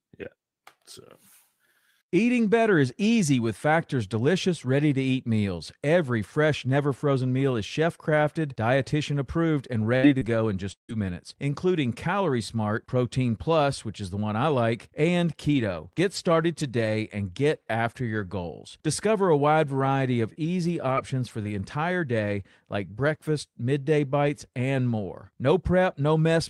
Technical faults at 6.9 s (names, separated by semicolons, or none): none